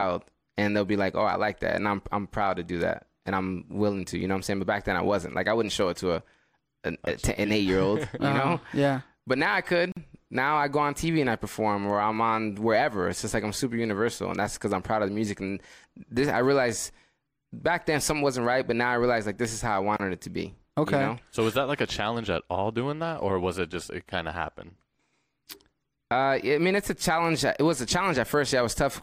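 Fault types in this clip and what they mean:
Gap at a join of encoded pieces: the speech was encoded in 10-second pieces joined without trimming each encoder run's start delay and end padding, so brief silences cut into it, 46 ms at 9.92 s and 31 ms at 19.97 s, with smeared edges.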